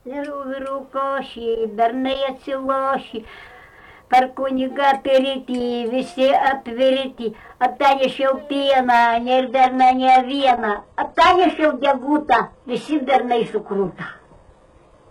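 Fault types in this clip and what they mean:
Adaptive stream at a lower bitrate: from 9.02 s, with no gap, the spectrogram abruptly loses everything above 11.4 kHz, which fits a switch to low-bitrate HE-AAC.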